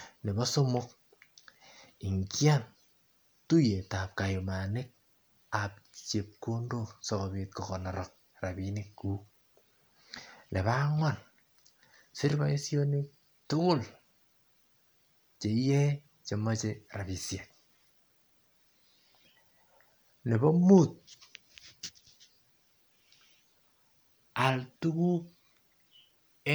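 No faults audible anywhere in this speech recording; nothing to flag.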